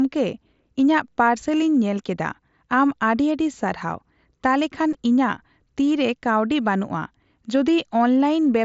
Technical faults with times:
4.93 concealed Bluetooth headset packet loss

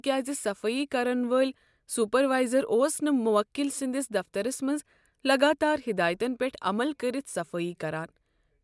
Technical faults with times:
none

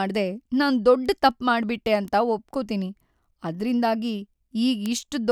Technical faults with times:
1.06 bit error spike
2.08 bit error spike
4.86 bit error spike

